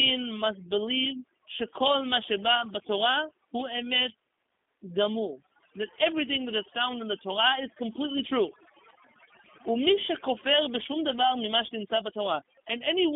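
Overdone noise removal runs throughout the speech: bands near the noise floor are switched off, leaving near-silent gaps with twinkling specks, unlike plain gating, which mutes everything at once. The G.729 codec also runs throughout, with plainly audible damage: sound is confined to roughly 250 Hz to 3.5 kHz, with nothing above 3.6 kHz. Its rough, synthetic buzz, rather than a simple band-limited muffle, fits 8 kbit/s G.729A.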